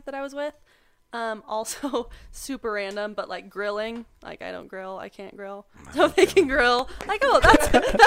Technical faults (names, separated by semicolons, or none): train of clicks